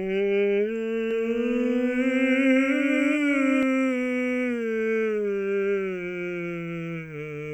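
From 1.11 s to 3.63 s the music carries a doubled audio track: a second, full-band copy trails the original by roughly 400 ms at around 5 dB lower, most likely because the signal reached the mix twice through paths of different latency. Unlike an echo or reverb, there is only one repeat, with no decay tail or room colouring, and the copy switches in and out abruptly at those two points.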